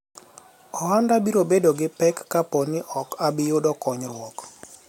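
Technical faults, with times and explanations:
Nothing technical stands out in this speech recording; there's no fault to list here.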